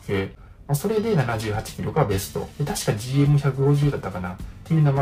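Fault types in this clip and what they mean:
Periodic clock jitter: the converter clock wobbles at around 1 kHz throughout, putting sidebands at that spacing around every component and giving a rough, metallic edge.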